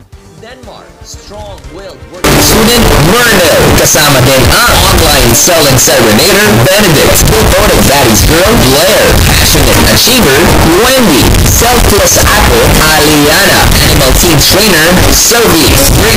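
From 2.24 s to the end, the audio turns into very loud, harsh distortion, with quiet stretches as loud as everything else, which points to signed and unsigned mixed up: the top bit of each 8-bit sample is likely flipped, so every zero crossing jumps across the full range.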